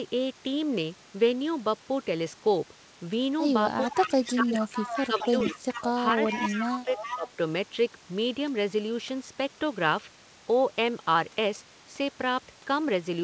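From 3.81 to 4.33 s a delayed copy of the speech follows it by 423 ms, about 10 dB below it. This is an echo leak, likely from loudspeaker pickup that the far-end echo canceller failed to remove. Room reverberation would smear into a tail, but this copy repeats at one fixed lag. Starting at 3.84 s and running to 4.7 s, the speech itself is pulled down by up to roughly 15 dB. This is speech suppressed in double talk, likely the canceller turning down both signals while they overlap.

The echo comes back from 4.72 to 5.85 s. From 5.07 to 7.28 s the suppression returns, dipping by about 10 dB at its deepest. The echo grows louder at 6.26 to 6.66 s and 6.97 to 7.3 s, where it sits only about 5 dB below the speech. Throughout, the G.722 call path cuts off everything above 8 kHz.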